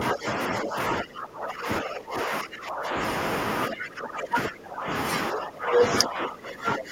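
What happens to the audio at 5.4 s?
At 5.4 s the speech is caught in a brief suppression from 5.3 to 5.83 s, dropping by roughly 15 dB. This is speech suppressed in double talk, likely an echo canceller mistaking the talker for loudspeaker echo while both sides spoke, and attenuating both.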